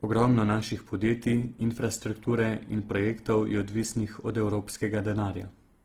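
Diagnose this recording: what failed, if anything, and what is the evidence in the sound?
Codec stage: Opus compression throughout, with rough, grainy, noise-filled speech while the band still reaches 20.2 kHz, likely from music-mode encoding at around 16 kbps.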